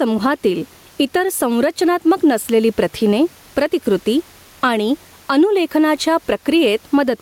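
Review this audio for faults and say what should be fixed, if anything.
Gain pumping runs through the whole clip. The level swings by roughly 10 dB, with room noise about 38 dB below the speech. Likely the input gain is far too high, with a fast limiter clamping each peak. Lower the microphone gain so peaks stay below the limiter's threshold.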